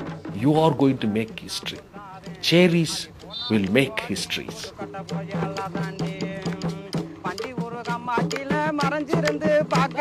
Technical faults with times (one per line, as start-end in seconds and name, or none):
none